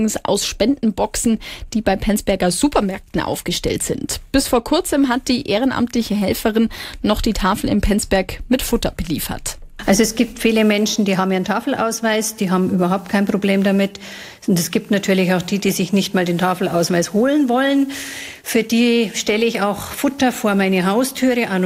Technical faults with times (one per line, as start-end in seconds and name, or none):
none